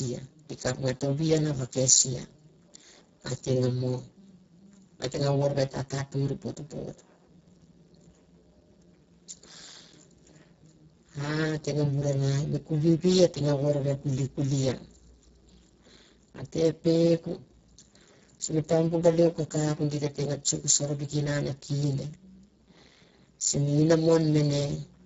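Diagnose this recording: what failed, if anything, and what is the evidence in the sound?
The speech sounds hoarse, buzzy and close to robotic from start to finish, with a hissy, noise-like top band that stops at 7.6 kHz. This is heavy Speex codec damage: the bitrate, which fits roughly 6 kbps, leaves too few bits to carry the excitation faithfully.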